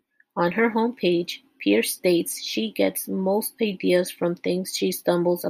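No technical faults are audible.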